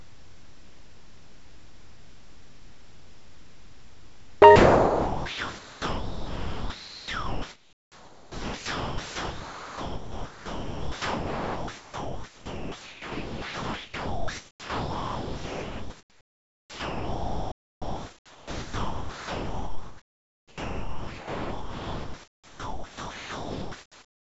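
From 0 to 4.42 s and from 4.56 s onward, speech gives way to steady comfort noise, likely sound dropped by the voice detector, appearing flat and featureless on a spectrogram.

At 17.52 s the output goes silent for 0.3 s, a playback stall likely caused by the player running out of data, seen as a flat silent stretch in the waveform.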